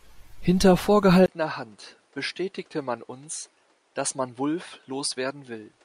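Input switched to a poorer device at 1.26 s, running to the end of the clip: after a 20 ms silence the speech turns duller and quieter, dropping by around 10 dB, with nothing above 10.1 kHz and a new background noise roughly 35 dB below the speech. That narrower band, level drop and fresh noise floor point to the recording likely having moved mid-take from the original microphone to a lesser input with its own tone and self-noise.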